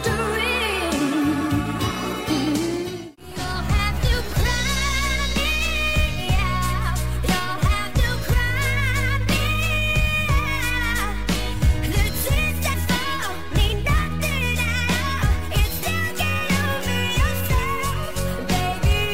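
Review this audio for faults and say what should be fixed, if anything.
Two brief glitches, at 12.73 to 12.75 s and at 15.82 s, come from damaged data in a compressed stream, where corrupted bytes make the decoder misread frames and resync. Verify file integrity with checksums and transfer over a reliable, error-checked path.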